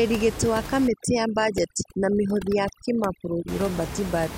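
A short speech clip with overdone noise removal from 0.88 to 3.48 s, right after "gĩtĩ wa". The suppressor's set too hard for a room noise sitting only about 11 dB under the voice, so it's gating out individual frequency bands near its noise estimate. The gaps between sounds drop away and break up into twinkly specks, and the quieter parts of the voice get dragged down with it.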